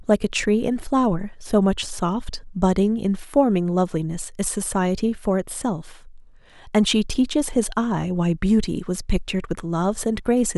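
No audible technical faults turn up anywhere in this speech recording.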